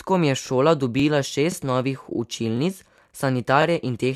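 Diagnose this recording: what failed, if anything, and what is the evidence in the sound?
The fault sits in the buffer stage: overlapping chunks. A short stutter recurs at 0.47, 1.00, 1.52, 2.05, 2.57, 3.10 and 3.62 s, each lasting 25 ms and spaced roughly 0.52 s apart. The speech was handled in 0.5 s blocks, and each block began 25 ms before the previous one finished. That slice of audio therefore plays twice at every join, giving the regular, clock-like repeats.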